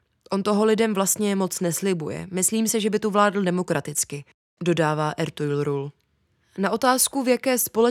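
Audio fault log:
No audible faults detected.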